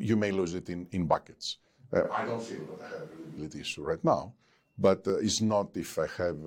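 At 1.14 s there is an overlap between stream segments. Two adjacent pieces of the stream, cut in 2.0 s segments, carried time stamps that overlapped, so the player discarded a short stretch of audio as if it were duplicated. The waveform jumps across the gap, and the result is a brief click or tiny skip in the speech. The same fault recurs at 5.10 s, with the same small discontinuity at the join.

From 2.04 s to 3.38 s the speech abruptly turns roomy and hollow, thinner in the low end and around 5 dB quieter, with background noise rising to roughly 25 dB below the speech. This is a switch to a distant microphone, most likely because the close microphone's signal dropped out and a farther pickup, such as a camera microphone, filled in. At 3.38 s the sound snaps back just as suddenly to the close, fuller pickup.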